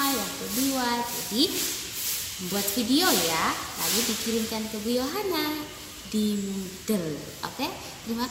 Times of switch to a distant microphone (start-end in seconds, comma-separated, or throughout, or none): none